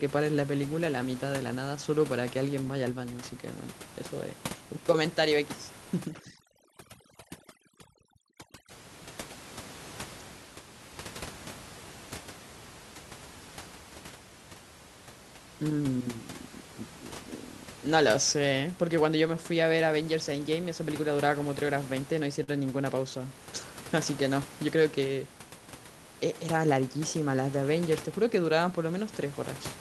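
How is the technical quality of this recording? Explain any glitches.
The recording has three distinct glitches, heard over a steady room background about 16 dB below the speech and a call-codec sound that stops near 12 kHz.

From 6.02 to 8.71 s there is overdone noise removal. An over-aggressive suppressor shuts off frequency bands near its noise estimate, leaving a lowered, twinkling background.

At 22.43 to 22.50 s there is a short stall from a late packet. The jitter buffer ran dry, so the receiver stretched the last sound by 44 ms, holding it unnaturally long.

From 24.67 to 25.06 s there is a jitter buffer speed-up. The overfilled buffer trimmed roughly 50 ms in pitch-period pieces, so the speech runs about 11% faster at unchanged pitch and sounds hurried.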